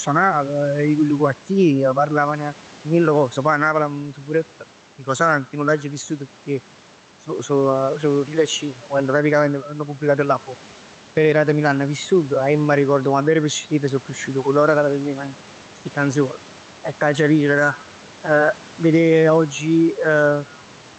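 Gain pumping runs through the whole recording, from start to finish. The level swings by roughly 5 dB: each loud stretch of speech is pulled down, and in the pauses the gain climbs back, with the room noise sitting well below the speech. The likely cause is input gain set far too high, with a fast limiter or compressor clamping every peak, which also squashes loud and soft passages closer together.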